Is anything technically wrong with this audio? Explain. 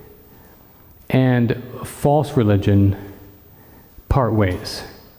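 No, nothing in this audio points to a technical fault.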